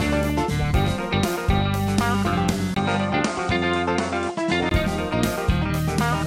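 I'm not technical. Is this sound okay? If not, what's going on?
No. From 2.74 to 4.71 s the sound turns duller, as if the input switched to a poorer device, which is the likely cause. Just after 2.74 s there is a 20 ms gap of silence. In that stretch nothing above about 9.6 kHz comes through, and a quiet new background noise appears while the loudness stays about the same. At 4.71 s the fuller sound returns.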